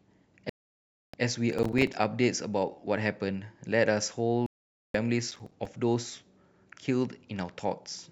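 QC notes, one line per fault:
0.50–1.14 s, digital broadcast dropout: the speech cuts to silence for about 640 ms, then resumes mid-flow. The receiver lost the signal or rejected corrupted frames and muted until clean data returned. The gap fits roughly 20 lost frames, and that stretch of speech is gone.
1.53–1.94 s, processor overload crackle: a gritty tearing sits on the speech for about 0.4 s. Processing fell behind, and more than a dozen buffers of around 5 ms were missed over that stretch, each leaving a hard-edged silent hole.
4.46–4.95 s, digital broadcast dropout: the sound mutes again, this time for about 480 ms, and picks up later in the programme. Frames failed to decode and the receiver held silence until good ones arrived, which fits about 15 frames lost.
5.31–5.65 s, processor overload crackle: a shorter, sparser burst of crackle of about a third of a second. Several 5 ms-scale buffers missed their deadlines and each dropped to silence, so the speech breaks up briefly until the load eases.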